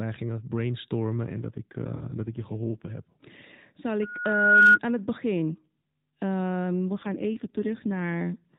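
From 1.26 to 2.91 s the speech drops into an AMR rate drop. The bandwidth stays the same and there is no gap, but the voice turns rougher and more synthetic. That fits the codec stepping down from 12.2 to 5.9 kbps, with the freed bits going to error protection on a weak link. Fewer bits for the excitation pulses leave the excitation driving the vocal-tract model cruder, so the voice gains a buzzy, processed edge until the rate recovers.

At 4.01 s a loudspeaker feedback squeal starts. A single tone at 1.4 kHz swells over about half a second to roughly 15 dB above the speech, then cuts off at 4.79 s, just before "aan het begin". Somewhere the microphone is picking up a loudspeaker it feeds, and the loop gain exceeds one at that frequency, so the tone grows on its own.

A second AMR rate drop runs from 6.91 to 7.96 s, with the same step down to 5.9 kbps and the same rougher, more synthetic texture. 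Outside these stretches the AMR-NB path at 12.2 kbps is heard as band-limited speech with light codec coloring.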